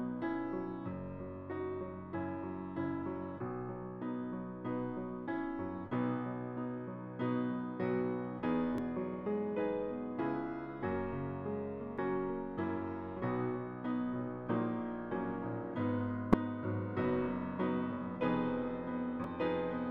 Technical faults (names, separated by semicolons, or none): damaged data in a compressed stream